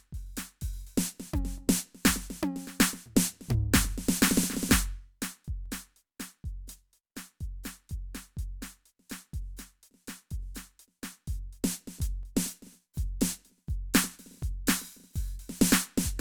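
From about 0.17 s right through to 15.52 s, the music picks up a click or pop every 1.09 s, around fifteen of them, evenly spaced. That steady rhythm points to clock drift buffer slips, likely two devices on separate clocks disagreeing by roughly a part in a thousand, so the buffer between them creeps until a chunk of a few dozen samples gets dropped or repeated, and you hear the seam.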